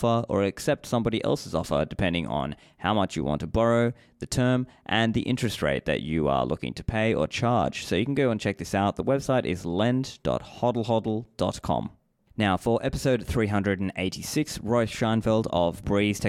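From 13.90 s to 16.21 s a train of clicks runs over the speech at a steady 11.3 per second, about thirty sharp ticks as loud as the speech itself, likely from electrical interference or a faulty connection or power supply. The spectrogram shows evenly spaced vertical broadband stripes; the waveform shows regular narrow spikes.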